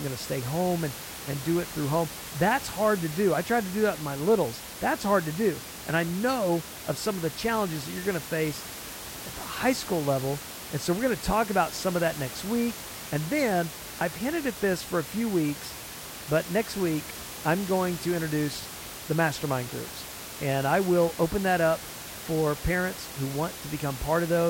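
Nothing technical goes wrong in this speech recording; the only other thing you hear is the room's own background noise, sitting about 13 dB under the speech.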